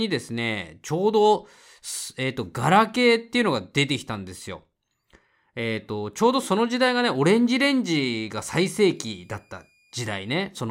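From 8.46 s to 10.46 s, a faint high whistle sits under the speech, roughly 40 dB below it, its pitch wandering only slightly between about 2.42 and 2.44 kHz. This is a switching supply whistle: a switching power supply near the recording chain has dropped into an audible burst mode, or is beating against another supply, and the resulting whistle has leaked into the audio as a tone.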